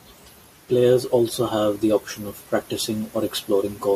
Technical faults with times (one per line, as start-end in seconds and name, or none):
none